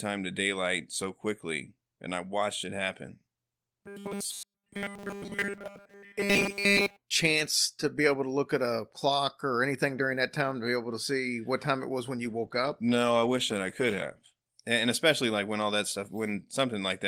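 Robotic sound from repeated short buffers runs from 3.80 to 6.98 s, after "I watched it happen". The speech becomes a rigid 200 Hz buzz, likely from a 5 ms buffer being replayed nearly throughout.

A call bitrate drop follows from 12.25 to 14.49 s, after "time it was when". The encoder falls from 32 to 15 kbps, leaving the speech rougher and duller for about 2.2 s.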